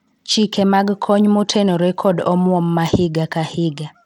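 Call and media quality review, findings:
Bluetooth SBC compression, throughout. Plainly audible gritty quantisation noise and unsteady treble on speech, nothing above 19.4 kHz. Likely a low SBC bit pool, consistent with a link near 96 kbps, starving the upper sub-bands and quantising the rest coarsely.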